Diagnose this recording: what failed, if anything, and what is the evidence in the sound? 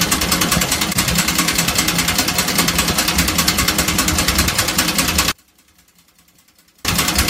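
From 5.32 s to 6.85 s the sound collapses by about 36 dB, leaving only a faint residue before full level returns. The likely cause is one channel inverted, most plausibly a swapped conductor in the analogue wiring: with one side's polarity reversed, everything common to both channels cancels when they are summed to mono, and only their small difference survives. A dropout or mute would go silent, and a gain fault would shrink everything evenly, not just the shared content.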